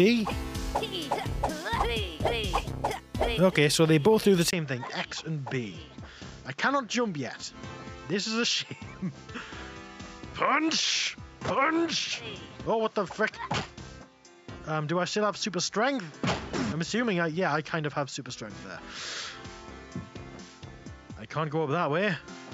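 At 4.51 s a brief 20 ms gap opens, and from there to the end the sound is duller, a few decibels quieter, with a new faint noise floor, likely an input switched to a poorer device. A spectrogram shows everything above 7.6 kHz cut off, and the waveform drops in height.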